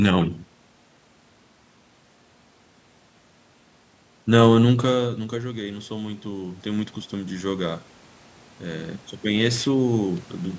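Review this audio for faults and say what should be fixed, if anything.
Automatic gain rising occurs twice. Shortly after the talker moves back from the microphone, around four and a half seconds in, the input falls by about 15 dB. The gain control then climbs about 7 dB from 4.67 to 7.88 s and about 4 dB from 8.63 to 10.29 s. The room noise swells along with the voice over those spans, which separates it from a talker simply moving closer. To prevent it, slow or cap the gain control's upward adjustment.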